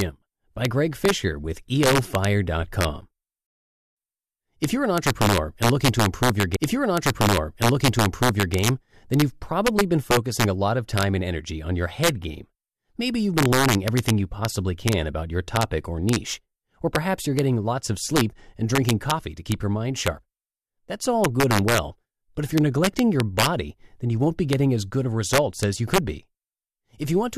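Integer overflow runs through the whole speech clip. The gain pushes peaks about 4 dB past the largest representable integer, and a small fraction of samples (roughly a third of a percent) wrap to the opposite extreme instead of being held at the ceiling. Each loud peak becomes a violent crack, far sharper and harsher than the flattened buzz of ordinary clipping.

From 6.55 to 8.55 s a stream segment is repeated. After "looking to improve your", the player jumps back and plays the same two seconds again before "then you've probably been", with a small blip at the seam. Unlike an echo or stutter, an entire stretch recurs intact.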